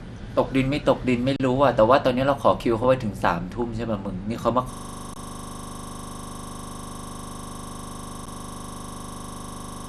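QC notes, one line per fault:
throughout — MP2 compression. The sound is dull, gurgly and granular. Upper bands flicker out. This likely comes from MPEG Layer II coding at a low rate, near 80 kbps.
1.36–1.40 s, 2.84 s, 5.14–5.16 s, 8.26 s — underrun with held sample. The waveform freezes flat for 36, 4, 24 and 11 ms, then resumes where it stopped, so edges stay soft. The last gap fits a 512-sample buffer.
3.62 s — DAB burbling. A few watery blips are heard. A bit error slipped into a single coded frame, putting short blips of noise in single sub-bands.
4.73 s to the end — system hang loop. A 40 ms slice repeats exactly until the clip ends. The output repeats at 25 Hz as the ring buffer kept cycling.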